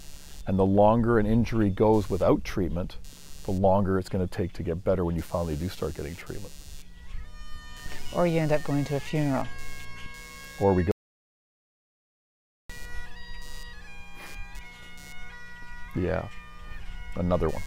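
Computer activity noise runs throughout the clip: a buzzing, chirping layer pulsing at roughly 150 Hz, sitting about 30 dB below the signal. Load changes in the computer disturb the audio circuit's shared ground, so the interference follows machine activity rather than the sound.

Audio dropout to silence occurs from 10.91 s to 12.70 s, where about 1.78 s of audio vanishes into silence with no room tone. The input was likely lost through a disconnected device, failed link or stray mute while silence kept being written.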